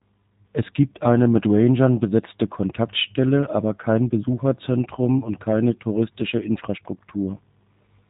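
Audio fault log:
Throughout: G.729 codec, and it's plainly audible. The speech is rebuilt from a vocal tract filter, a pitch predictor and a handful of pulses per frame, so it comes out intelligible but a bit rough and synthetic. Nothing gets through above about 3.8 kHz, and the low bitrate fits 8 kbit/s.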